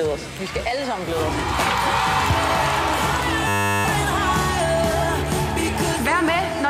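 From 3.48 to 3.85 s the sound locks into a system hang loop: one 10 ms slice repeats about 37 times, giving a steady 100 Hz buzz as the playback hardware cycles its buffer while the system stalls. A waveform shows identical repeating cycles, and a spectrogram shows evenly spaced horizontal lines at multiples of 100 Hz, with essentially no audio lost afterwards.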